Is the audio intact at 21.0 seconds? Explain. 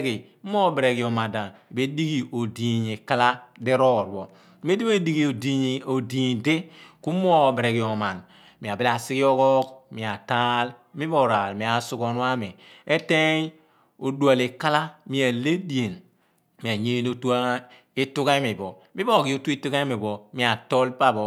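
Yes, at 21.0 seconds the speech plays through cleanly, with no dropout, click, distortion or other fault to be heard at that moment.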